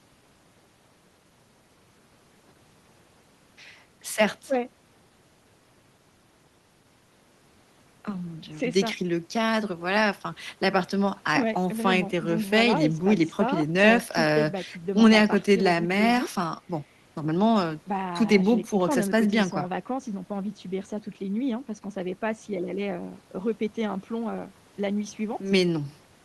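No technical faults are audible.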